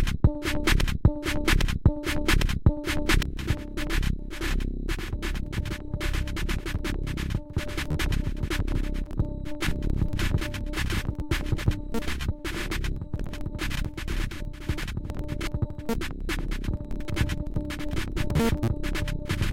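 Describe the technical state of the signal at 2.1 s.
A broken-record loop is running at 2.1 s. From the very start of the clip, already under way, to 3.23 s, the same 0.81 s fragment repeats back to back three times, identical each pass, and the sound that belonged there never arrives. The likely cause is a stalled player or stream resending the last piece it held. Unlike an echo, nothing decays or overlaps. Each repeat is a hard, exact copy.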